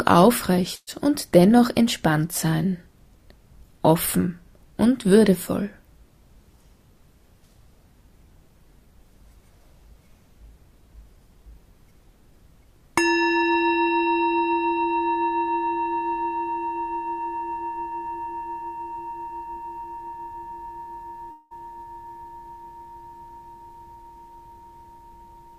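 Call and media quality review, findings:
Burst of packet loss, 0.75–0.89 s. Jitter buffer or concealment path. About 120 ms of audio missing. The receiver extends the last sound as a decaying buzz or hiss for about 114 ms, then about 30 ms of silence before playback resumes further on. Waveform: repeating, shrinking cycles or decaying noise, then a flat stretch. Spectrogram: frozen harmonics or noise band fading out, blank strip, abrupt onset.

Long network dropout, 21.31–21.53 s. Likely cause: network path interruption upstream of the receiver. About 200 ms of audio lost. Concealment fills nearly all of it (about 198 ms) with the prior sound stretched into a fading buzz or hiss. No silent gap before audio returns, skipping the lost part. Waveform: smooth decaying repetition. Spectrogram: smeared, static spectral band tapering off, then a hard discontinuity at resumption.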